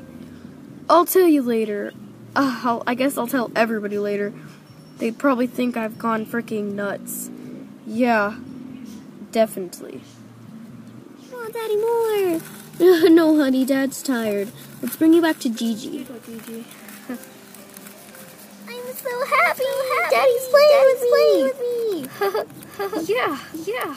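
From 18.78 s to the end, the audio plays twice: a second, full-band copy trails the original by about half a second at roughly 5 dB lower. It cuts in abruptly rather than building up, and has no decay or room colour that would make it a natural echo. This is a doubled audio track, likely caused by the same signal being captured again through a slower path, or by an edit that leaves two copies running out of step.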